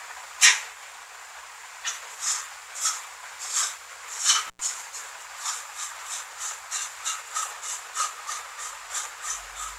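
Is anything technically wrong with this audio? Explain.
Yes. Intermittent contact at 4.47 to 4.60 s: a loose cable or plug briefly loses its connection, so the sound drops out for about 94 ms, with crackle as the contact breaks and remakes, and faint hiss filling the gap.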